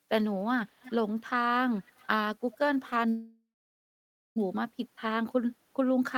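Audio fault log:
0.31–0.39 s, 0.66–1.2 s and 1.74–2.07 s, echo leak: a delayed copy of the speech trails 317 ms behind. It's barely there at first, strongest from 0.66 s at about 20 dB down, then fainter. Likely a speakerphone whose echo canceller let some mic pickup through.
3.09–4.38 s, call audio freeze: the audio stalls, the last sound stretches into a fading buzz or hiss, then there's about 0.9 s of silence. It picks up exactly where it stopped, nothing lost, just 1.27 s of gap added. Likely late packets draining the jitter buffer.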